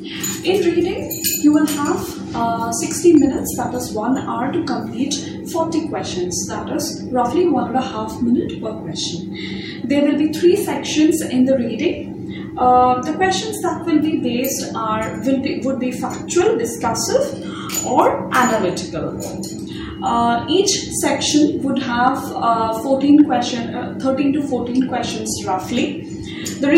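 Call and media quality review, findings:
Hard clipping: brief crackle on peaks at 3.15–3.17 s, 17.99 s, 22.08 s, 23.20 s and 26.75–26.77 s, overdrive about 1–2 dB. Probable gain stage or converter overload. Waveform shows flattened peak tops; spectrogram shows thin vertical broadband harmonic streaks.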